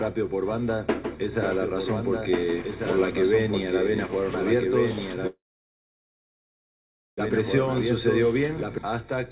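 From 1.44 s to 8.78 s there is a doubled audio track. A second full-band copy trails about one and a half seconds behind, roughly 5 dB quieter. It has no reverb tail. It starts and stops abruptly. Likely an edit or a slower capture path kept two copies out of step.

At 5.27 s a call audio freeze begins and lasts until 7.20 s. The last sound carries on briefly, then fades to near silence for about 1.8 s. The jitter buffer likely ran dry while packets were held up. The sound then resumes where it stopped, with nothing lost, only 1.9 s later. Through all of this, nothing reaches above 4 kHz, which fits a narrowband call codec.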